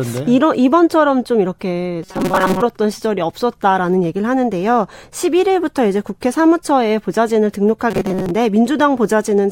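At 2.03 to 2.63 s and again at 7.91 to 8.32 s, the speech turns into a rigid, metallic buzz at 188 Hz: robotic sound from repeated short buffers. It is likely audio arriving too seldom, with a roughly 5 ms fragment looped over most of the real signal.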